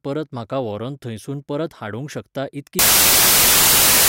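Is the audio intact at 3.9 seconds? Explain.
No. At 3.9 seconds the speech is hit by samples built from the wrong bytes. The fault runs from 2.79 seconds, just after "शकता इतकी", to the end of the clip. Each sample's bytes are misassembled, so the fast-changing low bits dominate. The result is loud, harsh broadband noise.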